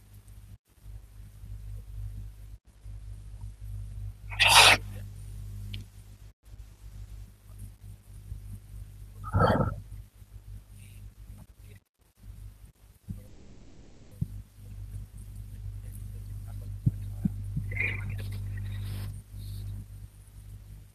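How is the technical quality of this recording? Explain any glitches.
One glitch stands out: a call audio freeze from 13.27 to 14.13 s. The last sound stretches into a fading buzz for about 0.84 s, likely because delayed packets drained the jitter buffer. Unlike a dropout, nothing is lost; speech resumes exactly where it stopped, just later.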